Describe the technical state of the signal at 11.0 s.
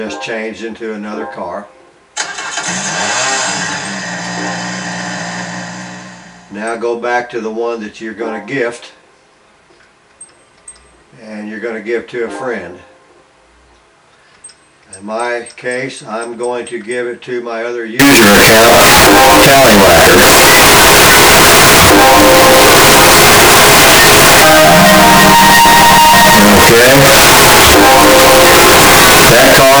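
No fault can be heard at 11.0 s: the signal is intact at that point.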